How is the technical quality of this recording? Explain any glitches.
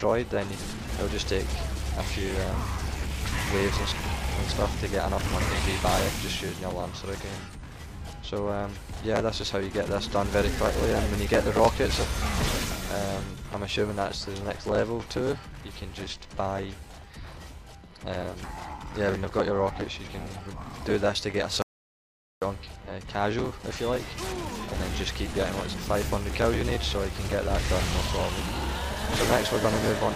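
There is one clear glitch. An audio dropout to silence runs from 21.62 to 22.42 s, lasting 0.80 s. The input was likely lost for a moment, through a disconnected source or failed link, while recording carried on writing silence. The sound cuts off abruptly into total silence with no room tone, then resumes mid-flow. Whatever happened in that gap is gone.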